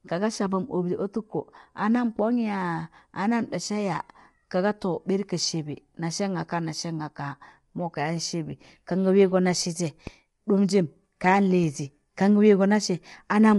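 From start to finish the speech sounds rough and grainy, with plainly audible codec damage: a hiss-like haze fills the gaps between the harmonics, and the top band lacks natural detail. A spectrogram shows smeared, noisy space between harmonic lines and nothing at all above 11.6 kHz. The likely cause is low-delay AAC compression (AAC-ELD), whose short frames resolve pitch poorly, and the damage fits a bitrate around 32 kbps.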